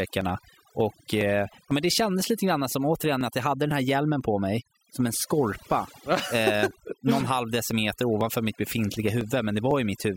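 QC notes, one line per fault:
Throughout: overdone noise removal. A noise reduction stage set far too strong keeps pushing individual frequency bands down or off whenever they sit close to its noise estimate, and the quieter parts of the speech fall into that zone along with the noise. The background collapses into near silence scattered with twinkling specks, and the voice is stripped of the low-level detail that normally fills it out.
0.21 to 9.71 s: periodic USB or driver dropouts. At a steady interval of 0.50 s something stalls the USB bus or the audio driver, and each time a sliver of audio, around a millisecond, is skipped outright rather than padded with silence, about twenty times across the span. Each skip makes a sudden jump in the waveform, heard as a small, evenly spaced tick or pop that shows up while the speech is sounding.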